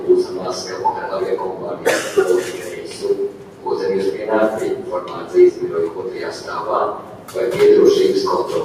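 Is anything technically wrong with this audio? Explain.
Yes. The noise suppressor misjudged parts of the sound as noise and attenuated them. Sound is cut by the noise suppressor from 2.70 to 2.91 s and from 3.29 to 3.65 s, each time dipping by about 4 dB, so the sound sinks for a fraction of a second.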